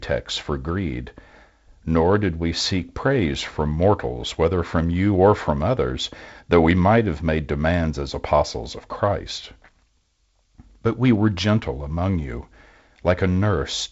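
No technical faults are audible anywhere in the speech.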